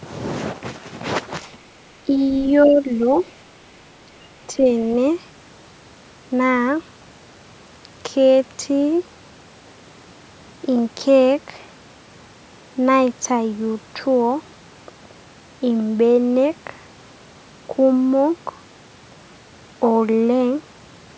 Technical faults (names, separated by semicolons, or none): other side's voice leaking through; speech suppressed in double talk